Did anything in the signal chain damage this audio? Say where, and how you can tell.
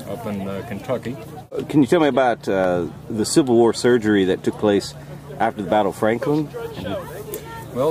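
Yes. Dropped samples at 2.64 s produce a single sharp click, visible as a thin vertical line across the spectrum. A fraction of a millisecond of the stream is missing, so the waveform jumps abruptly to a later value. This most likely happened at the driver or buffer stage.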